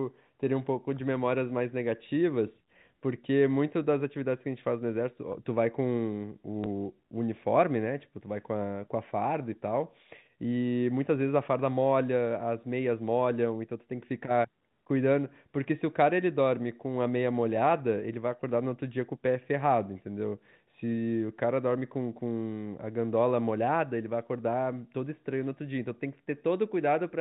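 Packet loss with the last packet repeated occurs at 6.64 to 6.66 s. One 20 ms packet went missing, and the receiver filled the gap by replaying the previous one. Its seams don't match the speech waveform, so there's a small blip, heard through the narrow G.711 telephone band.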